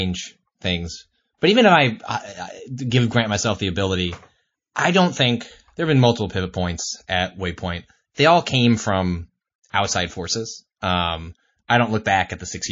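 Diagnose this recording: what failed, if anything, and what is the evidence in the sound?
Codec stage: the speech sounds watery and swirly throughout, with plainly audible damage that's likely MP3 compression, fitting a low bitrate around 32 kbps.

Pre-echo too: a short hiss about 19 dB up leads attacks at 1.38 to 1.42 s before "even if I" and 9.70 to 9.74 s before "outside forces". The encoder stayed in long blocks and spread the attack's noise into the quiet just ahead of it.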